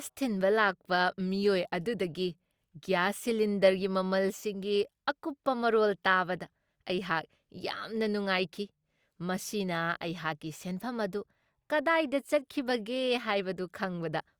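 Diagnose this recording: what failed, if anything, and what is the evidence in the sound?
Dropped samples at 9.75 s in this speech recording: a single sharp click with a thin vertical line across the spectrum. A fraction of a millisecond of the stream is missing, so the waveform jumps from one value straight to a later one, and that step discontinuity is the click. The gap is far too short to remove any audible sound. The likely stage is the driver or buffer, where a handful of samples went missing during transfer.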